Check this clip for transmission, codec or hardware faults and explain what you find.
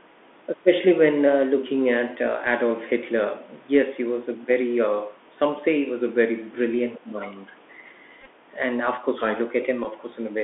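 Four kinds of fault are present: a narrowband Bluetooth headset codec throughout, a brief leak of the far end's voice, a short dip in the talker's level during double talk, and two bursts of repeated headset packets.

The Bluetooth CVSD headset codec shapes the whole clip. The audio sits in a band from about 250 Hz to 3.5 kHz, which fits a 64 kbps CVSD link. CVSD sends one bit per sample to step the waveform up or down, with a step size that adapts. Loud, bright sounds outrun that step, so sibilants turn scratchy and a grainy hiss sits under the speech. That granular texture, rather than the smeared warbling of a low-bitrate transform codec, identifies it.

From 6.98 to 7.06 s a faint second voice comes through, roughly 25 dB below the talker. This is likely the other side's voice leaking through: the far end plays on a loudspeaker and the echo canceller leaves a residue in the microphone. 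It is a separate voice rather than a delayed copy of the talker, which sets it apart from an ordinary echo.

Overlapping that, from 7.03 to 7.22 s, the talker's own level sinks by around 10 dB for about 200 ms. This is likely speech suppressed in double talk: with both sides active, the canceller could not separate the talker from the echo and turned everything down. The dip lowers the level rather than falling into silence, which distinguishes it from a dropout.

A Bluetooth headset packet repeated fault appears from 8.21 to 8.27 s. About 34 ms of audio is lost, scattered over roughly 52 ms, which points to around nine lost packets. The chip re-decodes the last good bits every 3.75 ms, and across the longest run of about 20 ms this gives a short buzz near 267 Hz. A fixed pitch like this sets it apart from a click or silence, which a lost packet filled with zeros would give.

At 9.84 s the same fault recurs. 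About 11 ms is lost, which fits three dropped packets.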